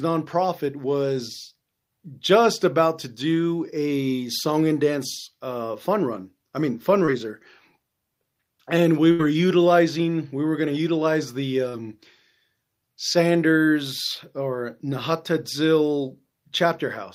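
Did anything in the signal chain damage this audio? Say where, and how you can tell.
Yes, the damage happened in the network stage. There is short concealed packet loss at 7.05–7.09 s, where about 18 ms was filled, and at 11.69–11.75 s, where about 40 ms was filled. Each is a brief smear where the decoder extended the preceding sound across the hole and then blended back. On a spectrogram, the harmonics or noise stop changing for that instant.

There is also a burst of packet loss at 9.11–9.21 s. About 80 ms of audio never arrived, and the receiver filled 77 ms by continuing the last sound at a falling level, so it is heard as a held buzz or a fading hiss. On a spectrogram this shows as a frozen, dimming band, followed by a discontinuity where the audio resumes later in the sound.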